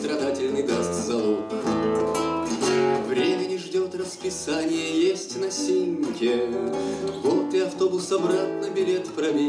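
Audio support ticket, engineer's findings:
Nothing stood out on listening, and no issue was found that would need action on this ticket.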